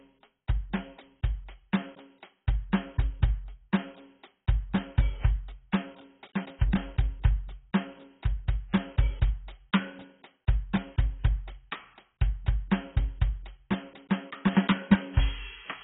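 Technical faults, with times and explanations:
Throughout, AAC compression: the music is dull and smeared, cut off above 3.8 kHz, with warbling, fizzy sustained tones, likely from heavy AAC-LC coding at a rate fitting 16 kbps. A spectrogram shows a flat ceiling at 3.8 kHz.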